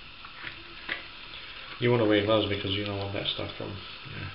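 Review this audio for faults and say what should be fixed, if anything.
No faults found in this audio, so nothing needs fixing.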